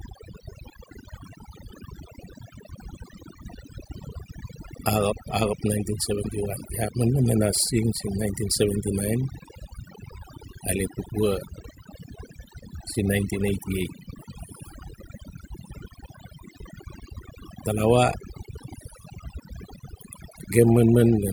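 Speech runs through the whole clip with overdone noise removal. A noise reduction stage was set too hard. Bands near its noise estimate get pulled down or shut off. Pauses drop and break up into twinkling specks. Quieter speech detail vanishes with them.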